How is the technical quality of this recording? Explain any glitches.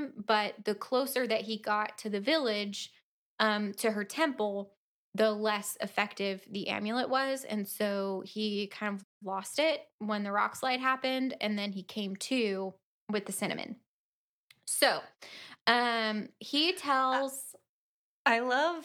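One glitch affects the recording. A playback stall runs from 9.03 to 9.22 s, between "so he kind" and "lost it when the". The speech cuts out for about 0.18 s, then resumes. The player likely ran short of data, or its thread was blocked, so output went silent until it recovered.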